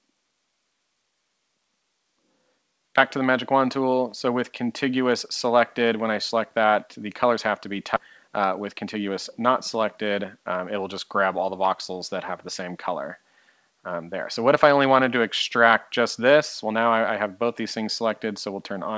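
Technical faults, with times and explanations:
7.96–7.98 s, skip ahead: Playback jumps forward with no filler, so roughly 0.4 s of sound never plays and the material on either side is butted together. The receiver discarded a waiting stretch, probably when its buffer overflowed, trading lost content for less delay. On a waveform the envelope changes abruptly at the join with no silent gap. On a spectrogram, harmonic or formant tracks break off and restart mid-contour. That vertical seam stands out against a band that is empty above 8 kHz from the G.722 call path.
8.27–9.09 s, jitter buffer speed-up: Over this 0.8 s the sound runs at about 109% speed with its pitch unchanged, so it feels briefly hurried. The buffer was still holding more than its target after the jump. It trimmed short pitch-period-length pieces many times in a row, removing around 70 ms in total. On a spectrogram, events bunch slightly closer together while harmonic spacing stays the same. 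On a waveform, the periodic cycles stay continuous, with whole cycles missing at each cut.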